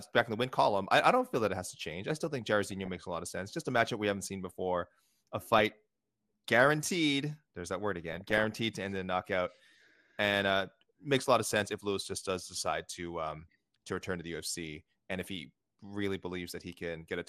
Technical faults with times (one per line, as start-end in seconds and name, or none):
0.00-17.29 MP2 compression
2.65-3.01 DAB burbling
5.46-5.72 DAB burbling
8.13-8.52 DAB burbling